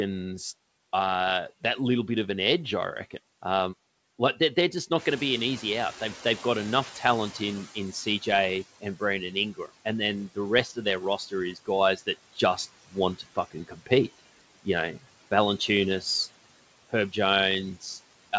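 Speech runs through a call path whose noise suppressor pulls the background down by about 18 dB throughout. The suppressor artifacts are audible as residual noise that ducks between phrases and swells under the voice. On a spectrogram the noise floor appears patchy and frame-by-frame mottled rather than a smooth band. The room noise jumps by about 12 dB near 5 s. Right after "like they're they're just", from 4.97 to 8.65 s, the noise suppressor is catching up: its noise estimate lags, so the louder background comes through first and then settles over about 3.7 s to roughly 14 dB of reduction. A waveform shows the inter-word floor stepping up, then tapering down. After "just want", between 13.18 and 13.91 s, speech is cut by the noise suppressor. Roughly a third of a second of soft speech energy is treated as noise and dropped by up to about 16 dB, so syllables sound swallowed. This appears as thinned or missing patches in the speech harmonics, under a spectrum that stops at 8 kHz, which fits a wideband call codec.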